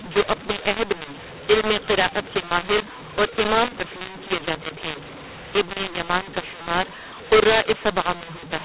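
Telephone speech runs through the whole clip with a mu-law and A-law mix-up. The audio was coded as mu-law but decoded as A-law, so the two logarithmic level scales disagree. Loud and soft samples land at the wrong sizes, making the speech harsh and gritty, and the quietest samples are pushed up so the pauses fill with hiss. Ordinary clipping would flatten only the peaks, but this scrambling also lifts the near-silent gaps. The sound stays inside the 4 kHz telephone band.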